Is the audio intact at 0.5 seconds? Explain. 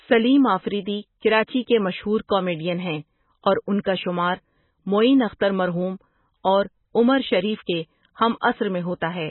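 No. MP3 compression runs through the whole clip, including 0.5 s. A bit-starved encoder, likely near 16 kbps, removes everything above 4 kHz and flickers weak frequency components, leaving dull, watery speech.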